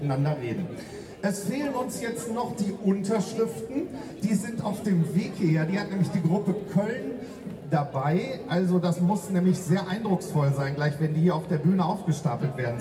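A steady buzz at 100 Hz rides on the audio from start to finish, heard only where there is signal. This is the resampler restarted on every block. Each 10 ms block was converted alone, leaving a small error at every edge. The pattern suggests a 44.1 kHz to 48 kHz conversion.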